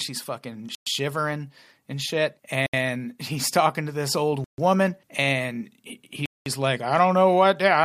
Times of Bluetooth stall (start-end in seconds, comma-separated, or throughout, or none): 0.75-0.87, 2.66-2.74, 4.44-4.58, 6.26-6.46